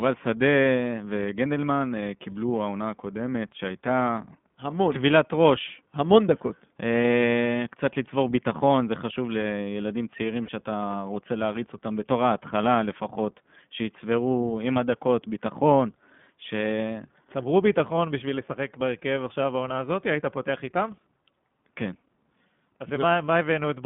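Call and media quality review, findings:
iLBC codec, whole clip: narrowband, nothing outside roughly 150 Hz to 3.5 kHz, plainly rough synthetic texture. Frame-independent coding, fitting the 20 ms mode near 15 kbps, not a generic lowpass.

Lost iLBC frames, 10.46–10.50 s: brief held buzzy vowel, consistent with one concealed 20 ms frame. Unlike a dropout, the gap is filled, and the voice recovers immediately.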